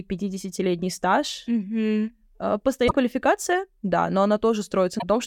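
At 2.85 s the speech breaks up briefly for about 80 ms, until 2.92 s. This is damaged data in a compressed stream. Some bytes in the encoded audio are wrong, so the decoder misreads those frames and loses sync. It then hunts for the next valid frame header. The same fault returns at 4.96 s, again for about 80 ms, ending at 5.03 s, with the same brief break.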